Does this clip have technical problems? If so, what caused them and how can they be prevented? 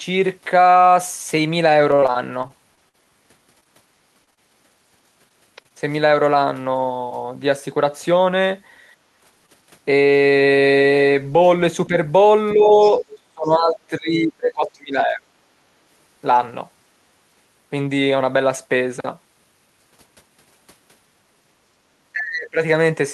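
Yes. The speech has several network and echo-control faults.

Repeated packet loss (robotic sound) runs from 1.91 to 4.39 s. There are 16 separate gaps, the longest 47 ms. The receiver patched each hole by extending the preceding sound, covering about 0.3 s in total, while about 0.24 s of real audio never arrived. Roughly 12% of that stretch is synthetic, which gives it a choppy quality. On a spectrogram the harmonics turn into short, frozen, overly regular blocks that repeat along the time axis, and the waveform shows periodic copied cycles between the real segments. A larger adaptive jitter buffer, forward error correction or packet redundancy, and a less congested network path would prevent this.

A short stall from a late packet occurs at 5.29 to 5.33 s. One packet arrived late and the jitter buffer drained. The decoder held the last sound for 16 ms until the packet arrived, then resumed where it had stopped. 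Nothing is lost, but one sound lingers with a faint buzz. A spectrogram shows a brief flat smear of the preceding spectrum, and the waveform shows a few repeated cycles. A jitter buffer that adapts quickly to a 16 ms shift in delay prevents this.

Short concealed packet loss hits at 5.63 to 5.66 s, 5.68 to 5.72 s and 9.46 to 9.50 s. Each time about 20 ms of the stream failed to reach the decoder in time, and roughly 16 to 18 ms of filler continued the previous sound before blending back. Each one is heard as a tiny wobble. On a spectrogram each shows as a narrow vertical band of smeared or duplicated harmonics, and the waveform shows a seam where real audio resumes. Forward error correction or redundant audio frames prevent these.

Background gated by the echo canceller occurs from 8.97 to 9.10 s. While the loudspeaker played, the canceller pulled the microphone down by about 9 dB for roughly 150 ms, so the room sound briefly sinks and then returns. 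The waveform shows a short notch in the noise floor, and a spectrogram shows a faint, full-width lighter stripe. Gentler suppression with comfort-noise fill, or better acoustic isolation between loudspeaker and microphone, prevents this.

Speech suppressed in double talk appears at 11.88 to 11.94 s and 12.55 to 12.78 s with dips of about 5 dB. It is far stronger from 13.20 to 15.34 s, with about two seconds pulled down by as much as 25 dB, and again from 22.12 to 22.59 s, with drops near 30 dB. The likely cause is the echo canceller clamping down while both sides spoke. The waveform envelope sags or collapses, and a spectrogram shows the speech fading, especially in the upper bands. A stronger double-talk detector, a headset, or less aggressive suppression prevents this.

The other side's voice leaking through appears at 12.83 to 12.91 s and 13.11 to 13.19 s as faint scraps about 25 dB below the talker. 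The likely cause is residual loudspeaker echo that the canceller did not fully remove. On a spectrogram these are weak, separate harmonic traces beneath the main speech, and they barely register on the waveform. Using a headset, lowering speaker volume, or improving echo-path modelling prevents this.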